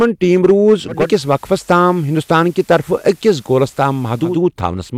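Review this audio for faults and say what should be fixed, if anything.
Hard clipping runs through the whole speech clip: the signal reaches a stage about 8 dB hotter than it can pass, so a small share of peaks are sliced flat, adding high harmonics heard as crackle and grit on louder syllables. Set gain so peaks stay below full scale at every stage.

Digital radio blending to analogue starts at 0.87 s, just after "ٹیٖم روٗز", and lasts until 4.45 s. The receiver loses the digital stream and cross-fades over 267 ms to the FM broadcast, so hiss rises to about 35 dB below the signal. The level stays the same. Improve reception or the antenna so the digital signal holds and the receiver doesn't fall back to FM.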